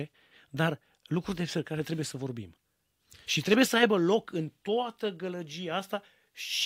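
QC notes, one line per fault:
Nothing stood out on listening to this speech clip.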